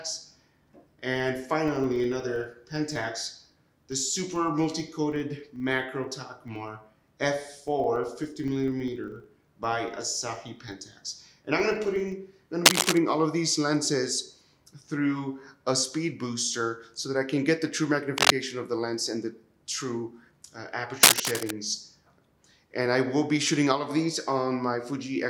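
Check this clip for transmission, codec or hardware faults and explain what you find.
Two faults are present: a block-rate buzz in the first half and three bursts of scratching later on.

From 0.0 to 12.2 s there is a filter restarted on every block. The filter loses its memory at each block edge and starts again from silence. Each restart leaves a small transient, repeating at 25 Hz, which points to 40 ms blocks. This is heard as a low buzz that rises and falls with the level of the sound.

Cable scratch noise appears at 12.66 to 12.98 s, 18.18 to 18.34 s and 21.03 to 21.51 s. These are dense, uneven bursts of rustling laid over the sound. They sit about 5 dB above the signal, and the middle one about 10 dB above. The likely cause is a worn cable, connector or control being moved, which makes its contact resistance change rapidly.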